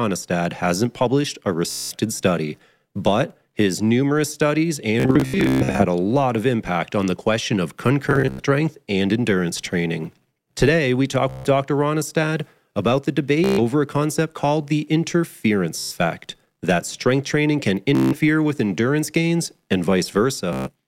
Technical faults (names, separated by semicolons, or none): Bluetooth stutter